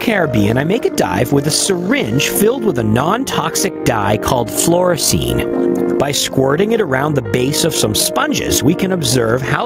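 From start to finish there's gain pumping: the gain is pulled down by around 15 dB on each loud sound, likely a fast limiter fighting gain set far too high. Running through the whole clip is overlap-add ripple too, where the frame overlap doesn't sum evenly, so the level wobbles about 6 dB roughly fifty times a second, a metallic buzz with extra tones around each note.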